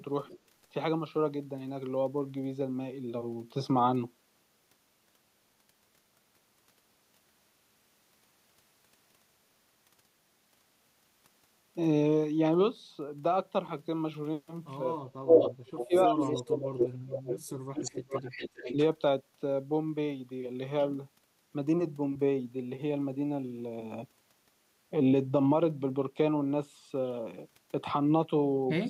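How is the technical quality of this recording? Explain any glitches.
The speech recording has two kinds of call-processing fault, concentrated around 15 to 19 s with one brief instance at the start.

Echo leak occurs at 0.27–0.39, 15.29–15.86, 16.21–16.87, 17.28–17.37 and 17.77–18.74 s. A delayed copy of the speech returns after 327 ms at the start and about 390–400 ms later on. This is likely a loudspeaker-side echo canceller passing residual pickup back. The first instance is faint, about 25 dB down. At 15.3 s the echo is louder than the speech itself, near equal at 16.2 s, and somewhat below it after that. A spectrogram shows the same harmonic patterns repeated, shifted right by that delay.

Speech suppressed in double talk occurs at 15.03–15.39 s and 15.86–18.2 s. While both sides overlap, the near talker's level collapses by up to roughly 35 dB in choppy pieces, totalling around two seconds in the longer stretch. 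This is likely caused by the echo canceller failing to tell the talker from the loudspeaker echo and attenuating both. The waveform shows abrupt envelope notches, and the spectrogram shows the upper bands thinning or going dark.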